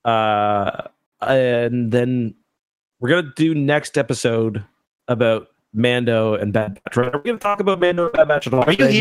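From 6.59 to 8.80 s comes repeated packet loss (robotic sound): 27 gaps of up to 79 ms, each patched by extending the last sound, so 35% of the span is filler. Unlike a single dropout, these rapid, recurring patches make the speech choppy, with pieces missing.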